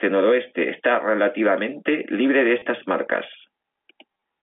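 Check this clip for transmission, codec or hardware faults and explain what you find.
Packet loss with the last packet repeated occurs twice. At 2.59 to 2.62 s, after "está relativamente libre de", 30 ms is replaced by repeats, which fits 10 ms packets. From 4.12 to 4.22 s, 60 ms is lost in short runs of up to 20 ms. The sound briefly stutters robotically.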